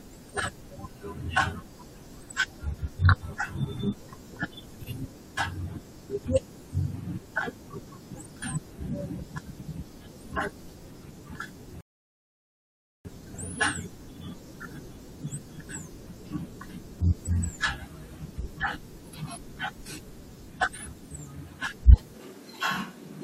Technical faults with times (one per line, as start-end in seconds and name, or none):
11.81-13.05 rebuffering stall
22.14-23.23 switch to a distant microphone